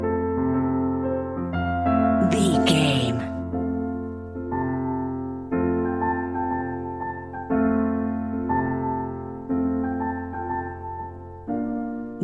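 No technical fault can be heard anywhere in the recording. Nothing in the audio points to a problem in how it was captured, processed or delivered.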